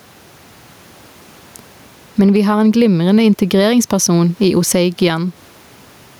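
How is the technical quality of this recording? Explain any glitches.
The recording has one clear fault, gain pumping, and it runs through the whole clip. The level breathes with the speech. The swing is around 10 dB. The likely cause is input gain set far too high, with a fast limiter or compressor clamping down on every peak. Loud and soft passages end up squashed together. The room noise sits about 41 dB below the speech.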